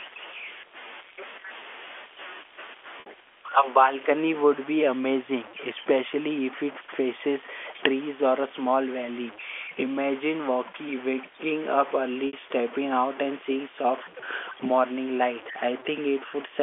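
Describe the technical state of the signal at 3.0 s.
At 3.00 s there is a packet loss with pitch repetition lasting until 3.06 s, a 60 ms gap that fits two lost packets. The receiver filled the hole by repeating the last pitch period of the speech instead of leaving it silent. The result is a brief held, slightly buzzy tone where the natural movement of the voice freezes for a fraction of a second before normal signal resumes.

The same moment also carries grainy, signal-dependent distortion, most likely from low bit depth without dither. The sound points to truncation to about 6 bits, putting the error only roughly 20 dB below the signal. Because truncation ties the error to the waveform, the grit rises and falls with the speech and is most obvious on quieter parts, underneath the normal 300 to 3400 Hz telephone band of the A-law line.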